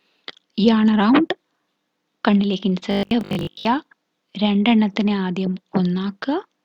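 From about 2.91 to 3.67 s the sound turns into a rigid 50 Hz buzz, classic robotic sound from repeated short buffers. Most of that stretch is a roughly 20 ms chunk looping while the real audio gets skipped, likely because audio was arriving too seldom.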